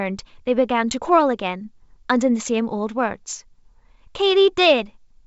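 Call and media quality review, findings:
No faults found in this call.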